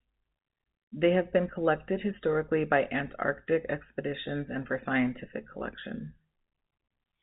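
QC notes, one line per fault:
No fault to note in this speech clip, which carries the band limit of its G.711 telephone coding.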